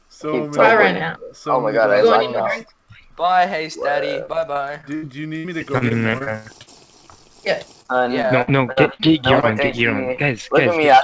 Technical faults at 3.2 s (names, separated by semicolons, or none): none